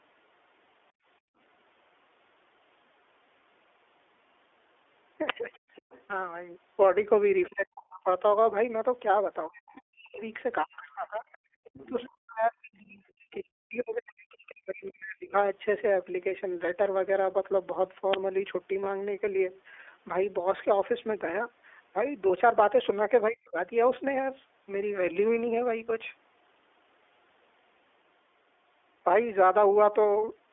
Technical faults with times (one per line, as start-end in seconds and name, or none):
0.00-30.52 iLBC codec
0.92-1.38 background gated by the echo canceller
5.29 uninitialised buffer
5.52-6.02 other side's voice leaking through
7.43-7.49 other side's voice leaking through
7.49-8.07 speech suppressed in double talk
9.48-15.33 speech suppressed in double talk
11.32-12.08 other side's voice leaking through
11.53-11.61 background gated by the echo canceller
18.14 uninitialised buffer
18.84-18.86 lost iLBC frames
22.28-22.31 lost iLBC frames
23.30-23.58 speech suppressed in double talk